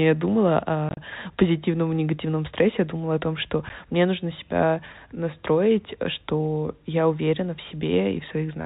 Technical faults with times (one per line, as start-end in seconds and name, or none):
0.89-0.97 packet loss filled with silence
3.69 packet loss filled with silence